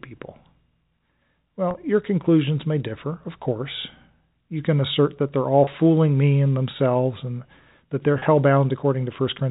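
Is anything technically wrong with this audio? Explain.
Yes. Packet loss with pitch repetition occurs three times, at 1.71 s before "your conclusions may differ", at 5.64 s between "assert that they're all" and "fooling me and themselves", and at 8.19 s after "themselves and that they're". Each time about 30 ms of audio, consistent with a single lost packet, went missing and the receiver filled it by repeating the last pitch period, giving a brief held, buzzy catch in the speech. The G.711 telephone coding carrying the audio keeps it band-limited below 4 kHz.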